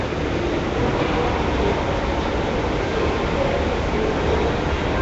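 Nellymoser compression runs throughout, with plainly audible damage: a rough, hissy haze around the sound, a smeared, underwater quality, and nothing above 7.7 kHz. The likely cause is Flash's Nellymoser Asao codec, at a rate consistent with about 32 kbps, starving weak bands and filling them with noise.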